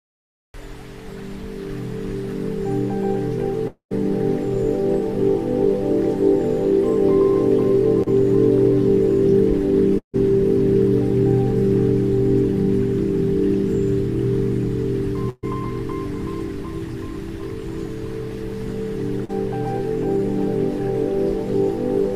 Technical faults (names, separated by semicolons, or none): long network dropout; short concealed packet loss; burst of packet loss